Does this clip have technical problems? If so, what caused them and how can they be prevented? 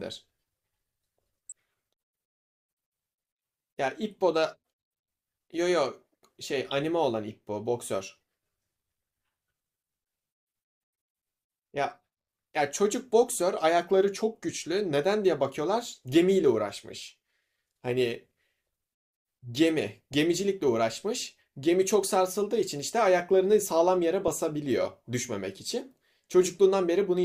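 Yes: a brief chirp-like blip at 20.12–20.14 s in the speech comes from a corrupt frame decoded. Flipped bits in roughly two compressed frames misplaced energy in frequency, giving a fairly quiet burst. Error detection with concealment of damaged frames, rather than playing them, prevents it.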